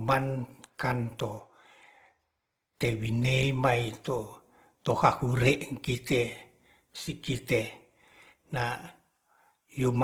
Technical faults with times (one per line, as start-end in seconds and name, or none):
0.00-10.03 Opus compression